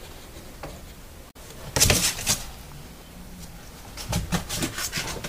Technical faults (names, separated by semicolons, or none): damaged data in a compressed stream